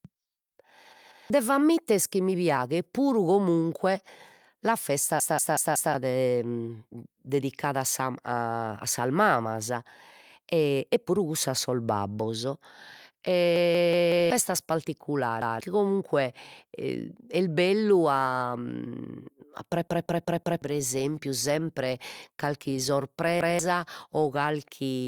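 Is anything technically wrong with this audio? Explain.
Yes, there's a repeated buffer fault six times: at 0.93–1.30 s, 5.20–5.94 s, 13.56–14.30 s, 15.42–15.60 s, 19.88–20.62 s and 23.41–23.59 s. When fresh audio didn't arrive in time, playback looped the last chunk of speech. Each chunk is about 186 ms, which fits an 8192-sample buffer. It comes through as a choppy stutter with a hard join at each repeat. The chunk plays once more at 15.42 and 23.41 s, twice more at 0.93 s, and four times more in the three longer stretches, where something like 0.7 s of real speech goes missing.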